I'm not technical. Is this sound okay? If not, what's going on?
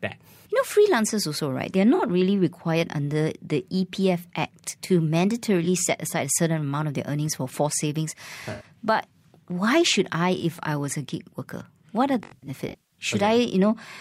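No, there are four glitches from AAC frame loss with concealment. Small chunks of the compressed audio went missing, and the player covered the gaps by guessing from the sound just before, leaving brief smeared, hissy patches. You'll hear them at 1.94 s, just before "really required under the"; at 5.64 s, before "set aside a certain"; and at 8.52 s, right after "earnings for forced savings". The last is a rougher stretch from 12.23 to 12.99 s, with the longest gap around 150 ms.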